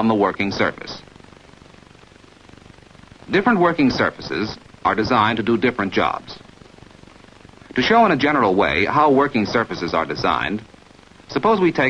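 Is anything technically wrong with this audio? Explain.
No, no technical faults here.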